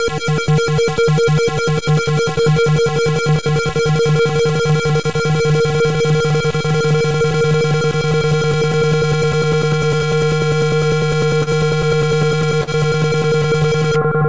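Short concealed packet loss occurs at 2.42, 9.97, 11.43 and 12.63 s, each losing about 30 ms before decoding. The receiver extends the preceding sound over the gap and blends back, leaving brief smears or wobbles, heard through a call path with nothing above 8 kHz.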